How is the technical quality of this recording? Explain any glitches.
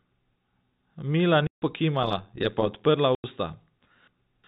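The recording has three glitches: two silent dropouts and a stretch of metallic buzz, all heard through telephone-bandwidth G.711 coding that cuts off at 4 kHz.

Packet loss filled with silence, at 1.47–1.62 s (150 ms) and 3.15–3.24 s (90 ms): missing packets were replaced by hard-edged silence. Both gaps fit 30 ms packets. Unlike concealment, nothing is smeared or repeated.

Overlap-add ripple, at 2.02–2.87 s: mismatched frame overlap makes the level swing about 11 dB around 100 times a second. The result is a steady metallic buzz with extra tones around each note rather than random crackle.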